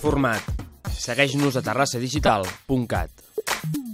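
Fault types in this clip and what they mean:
repeated buffer: A brief buzzy click at 0.85 to 0.87 s, where a tiny slice of sound plays five times in a row with a hard join at each repeat. Looping a piece this short, about 5 ms, repeats it roughly 200 times a second, so the stutter fuses into a rasp rather than an audible echo. New audio failed to reach the output in time, so the device replayed its last buffer. Little or nothing seems to be lost afterward.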